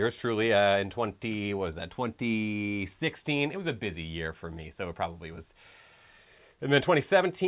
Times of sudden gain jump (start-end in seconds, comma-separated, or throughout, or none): none